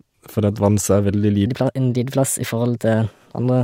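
From 1.47 s to the end of the clip, the speech jumps into a section at the wrong speed: it plays about 1.22 times faster than it was recorded, so pitch rises roughly three semitones and the voice sounds hurried and thinner. The likely cause is that this stretch was clocked or resampled at the wrong rate. On a spectrogram, harmonics and formants step upward at 1.47 s; the waveform's syllables compress visibly.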